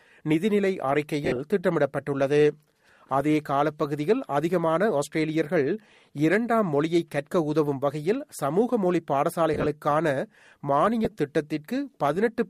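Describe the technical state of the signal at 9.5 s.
Lost LE Audio frames from 9.54 to 9.66 s: about 70 ms of short gaps, the longest around 20 ms, are filled with sign-scrambled repeats of earlier spectra. This gives a grainy speech smear, which shows as blurred spectrogram columns and noisy waveform patches.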